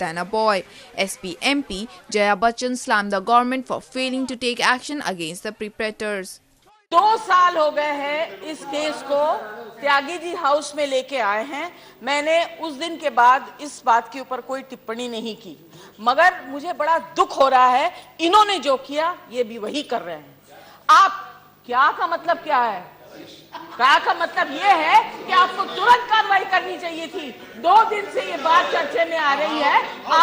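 At 29.19 to 29.22 s there is a brief burst of DAB burbling, short blips of noise over the audio. Residual bit errors, roughly 0.15 percent, slipped past error correction into the MP2 data, so corrupted sub-band samples put short blips of noise into single sub-bands. The length fits two damaged frames.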